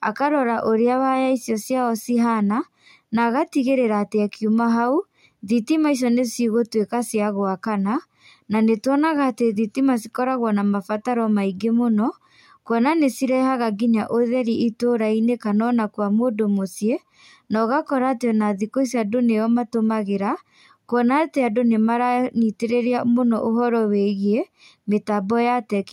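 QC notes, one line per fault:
No fault to note.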